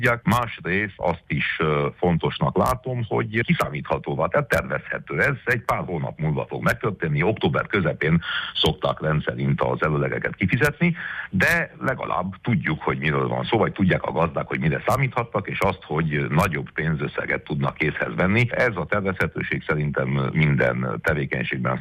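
No technical faults can be heard anywhere in the recording, and the signal holds steady throughout.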